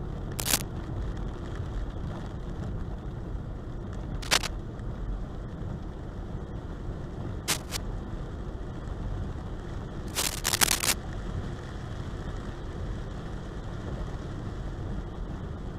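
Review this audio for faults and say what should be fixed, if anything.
Cable scratch noise turns up four times: 0.39 to 0.61 s, 4.22 to 4.48 s, 7.48 to 7.77 s, and a longer patch from 10.07 to 10.93 s. It's a ragged rustle sitting a bit above the sound, and noticeably louder in the 4.2 s burst. The likely cause is a worn cable or connector being moved, so its contact flickers. Swap or reseat that lead and keep it still during takes.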